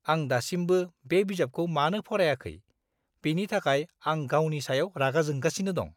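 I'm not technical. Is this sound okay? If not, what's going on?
Yes, no faults here.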